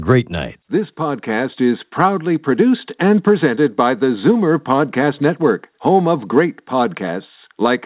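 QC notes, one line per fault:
No fault found.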